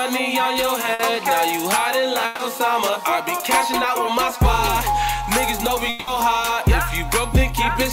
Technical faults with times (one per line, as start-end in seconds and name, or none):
0.93-1.01 burst of packet loss
2.25-2.41 burst of packet loss
5.89-6.09 long network dropout